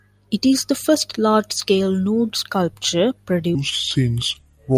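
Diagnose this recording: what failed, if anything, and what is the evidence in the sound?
At playback, from 3.55 s to the end, just after "large scale nude sculpture", the stream runs at the wrong sample rate without conversion. The speech slows to 0.73 times speed and drops about 5.5 semitones, which fits 44.1 kHz material clocked out at 32 kHz.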